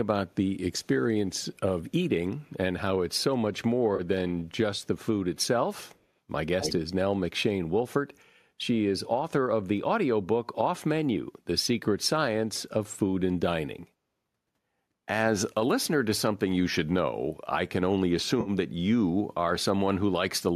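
At 0.3–0.35 s and again at 1.4–1.58 s, a very faint, thin copy of the speech trails the original by about a quarter of a second (252 ms), sitting far below the direct sound. It is most likely an echo leak: a loudspeaker on the far end fed the talker's own speech back into its microphone, and the echo canceller let a residue through.

At 3.96–4.0 s a brief smeared, noisy patch replaces about 30 ms of the speech. This is AAC frame loss with concealment. A 30 ms gap fits roughly three lost frames of a low-delay AAC stream. The decoder filled the hole by reusing the last good spectrum, which blurs the sound rather than leaving a silent dropout.

The same delayed copy returns at 5.87–5.99 s, still very faint. At 6.6–6.73 s it becomes much stronger, only about 5 dB below the speech, and reads as a clear doubled echo 252 ms behind. That burst likely shows the canceller briefly losing track of the returning sound.

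At 18.41–18.5 s a longer smeared, phasey stretch of about 50 ms marks a second AAC frame loss with concealment, consistent with around five consecutive frames going missing. Because the gap is longer, more of the patch is made up from repeated spectral content.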